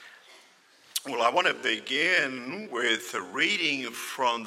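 At 1.47 s the pace suddenly drops, and it stays slow to the end. This is a time-stretched section, running at about 0.6 times the original speed. The pitch does not fall with it. The likely cause is software stretching the audio to fill a set length. To keep the pitch, it repeats short slices of sound. The slowed part drags.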